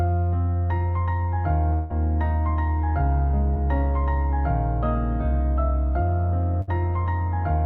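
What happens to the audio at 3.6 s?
Between 3.54 and 3.57 s there is a short concealed packet loss: about 20 ms of audio did not reach the decoder in time, and the receiver papered over the gap by extending the preceding signal for about 15 ms before blending back into the real stream. The result is a brief smear or wobble just before the moment asked about, where the sound momentarily blurs instead of carrying on cleanly.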